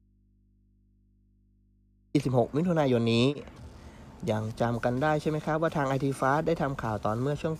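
The audio opens in an audio dropout to a faint residue already under way, with only mains hum, around 35 dB below the signal, until the sound returns abruptly at 2.15 s. The hum and the sharp return, unlike a pause or fade, point to a likely break in the feed with the input left open.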